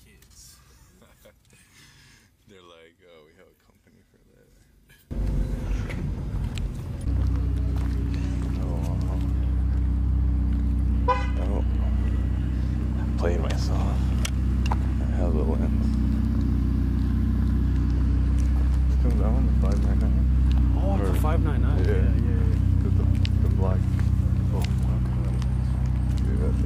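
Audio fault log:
0.00–5.11 s, one channel inverted: when the two channels are summed to mono, the sound drops by about 28 dB and turns faint. The likely cause is reversed polarity on one side, so the material shared by both channels cancels and only their small difference survives. On a waveform the mono sum sits as a narrow trace, widening abruptly at 5.11 s; a spectrogram shows a faint band over that span.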